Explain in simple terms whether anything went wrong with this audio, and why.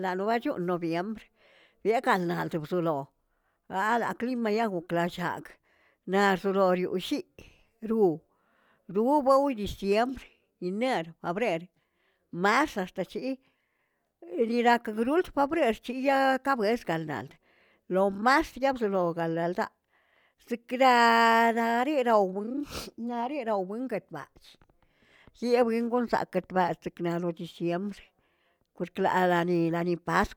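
Nothing went wrong here: the speech comes across steady and natural the whole way, with nothing that sounds broken or out of place.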